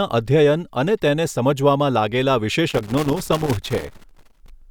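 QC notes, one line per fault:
2.70–4.50 s, loose connector crackle: a worn or dirty contact in the signal path kept making and breaking as it shifted, chopping the speech on and off for nearly two seconds, with any DC on the line adding pops, so it comes through as irregular scratchy crackle.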